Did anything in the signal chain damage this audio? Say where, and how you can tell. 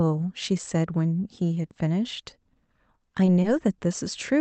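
Yes. Two short stalls from late packets, at the network and jitter-buffer stage. At 3.42 to 3.46 s a sound is held 20 ms too long. At 3.78 to 3.83 s, 30 ms. Nothing is missing. The buffer ran dry, so the receiver stretched the last sound until each packet arrived, leaving a slight buzz or dip.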